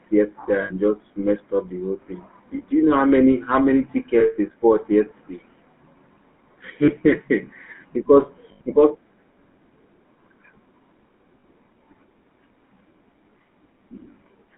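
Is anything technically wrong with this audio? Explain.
Yes. The whole clip has a buzzy, gravelly roughness to the speech, and the band is confined to roughly 200 Hz to 3.4 kHz, with nothing audible above that. This is the GSM full-rate codec, plainly audible here. It models the vocal tract and excites it with a sparse train of regularly spaced pulses, which gives this coarse, rasping texture. The sound fits a 13 kbps full-rate coder on a narrowband telephone line.

There are also six short spots where the sound freezes into a rough, metallic ring. These occur at 0.62 s (about 80 ms), 4.20 s (about 180 ms), 6.84 s (40 ms), 8.52 s (80 ms), 11.40 s (40 ms) and 13.30 s (20 ms). These are lost GSM frames. The decoder repeats the parameters of the last good frame, so the held sound rings instead of continuing.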